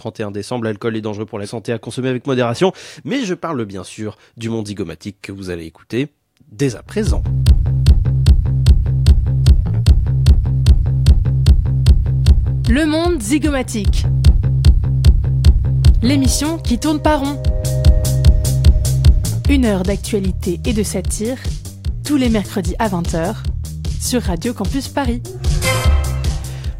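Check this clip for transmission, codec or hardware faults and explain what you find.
Nothing stood out on listening to this clip.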